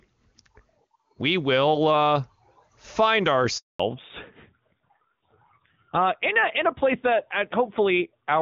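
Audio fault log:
3.58–3.80 s handover gap: the call switched networks and no speech frames arrived for 220 ms, so the sound dies away quickly into silence.
3.80 s to end, fallback to narrowband: the clear HD Voice link gives way to an older narrowband codec, which fits AMR-NB at 7.4 kbit/s. Everything above 4 kHz disappears, leaving duller, rougher speech.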